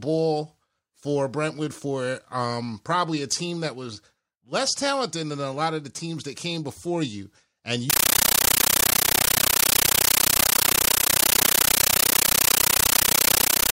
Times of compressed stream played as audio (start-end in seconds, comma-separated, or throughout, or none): 7.90-13.74